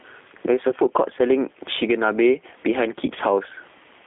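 Gain pumping runs throughout: the level ducks by around 15 dB under each loud syllable, likely from excessive input gain driving a fast limiter.

The G.729 codec colours the whole recording: speech is confined to roughly 250 Hz to 3.5 kHz and sounds rough and synthetic, consistent with 8 kbit/s G.729A pulse-based reconstruction.

VoIP packet loss concealed by the speech codec occurs at 0.70–0.74 s and 3.06–3.09 s. Each gap, which fits one lost 20 ms packet, becomes a brief extrapolated sound that fades, and the voice stays weak or distorted for a moment after speech resumes.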